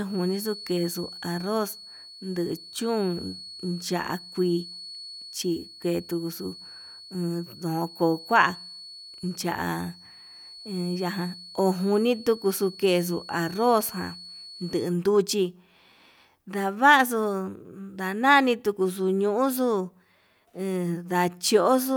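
From the very start until about 14.96 s, a feedback whistle sits behind the speech: a thin, steady tone near 4.4 kHz, roughly 20 dB under the voice and slowly swelling and fading. It's likely a speaker-to-mic loop hovering just at the edge of howling.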